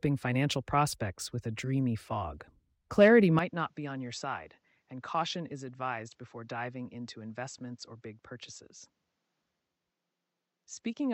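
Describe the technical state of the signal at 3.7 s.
At 3.7 s the sound is already dull. From 3.39 s to the end, nothing reaches above 7.9 kHz. It is about 10 dB quieter, with faint new background noise. This is likely an input switched to a poorer device.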